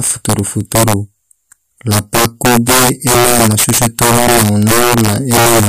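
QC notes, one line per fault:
throughout: integer overflow. The speech is driven about 9 dB past full scale, and instead of being limited, each peak wraps to the opposite extreme. Roughly 7 percent of samples flip this way, producing harsh cracks on louder syllables, far sharper than ordinary clipping.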